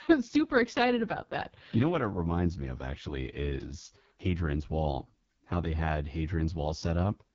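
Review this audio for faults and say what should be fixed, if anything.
Throughout the clip, an AMR wideband (HD Voice) codec at its lowest rate, which fits the 6.6 kbit/s mode, renders speech rough and raspy, with nothing above 7.4 kHz. To prevent it, carry the call at 12.65 kbit/s or higher.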